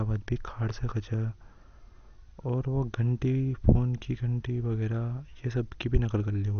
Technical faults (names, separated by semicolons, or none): MP2 compression